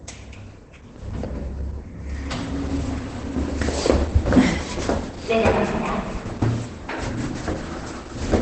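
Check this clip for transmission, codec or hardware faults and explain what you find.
One codec fault runs through the whole clip.

Opus compression, throughout: the audio stops dead above about 8.6 kHz, and what remains sounds muffled, hoarse and heavily damaged. The likely cause is an Opus encoder starved of bits, running in its speech-oriented SILK mode at wideband, which fits a rate around 12 kbps. That mode discards the top band and models the rest coarsely, so detail turns dull and rough.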